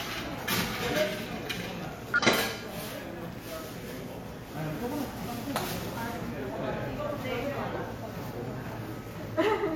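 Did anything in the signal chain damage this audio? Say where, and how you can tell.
Yes. The damage is at the codec or storage stage, from damaged data in a compressed stream. Three short glitches, each heard as a chirp, squawk, click or short hole, occur at 2.14 to 2.20 s, 4.46 to 4.50 s and 7.39 to 7.44 s. Corrupted bytes made the decoder misread its frames and lose sync until it found the next valid header. On a spectrogram each burst is a thin, broadband smear or blocky patch lasting a few tens of milliseconds. On the waveform it is an abrupt, unrelated segment.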